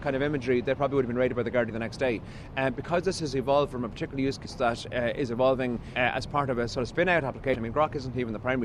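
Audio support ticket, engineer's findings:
Compressed frames skipped at 1.69–1.71 s, 4.45–4.48 s, 5.95 s and 7.53–7.56 s. Decoder drops missing or damaged frames, so audio jumps ahead about 40, 150, 150 and 100 ms, consistent with 20 ms frames.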